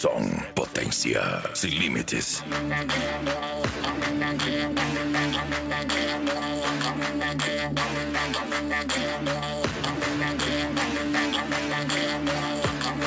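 No technical faults are audible.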